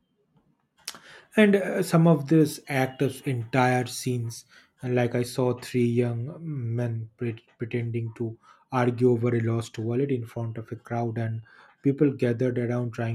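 From 2.41 to 4.84 s, between "and uh some of" and "and like i", pre-emphasis is left on: a CD-style 50/15 µs treble boost went uncorrected, lifting 10 kHz about 8 dB above 1 kHz, so the speech turns thin, bright and sibilant.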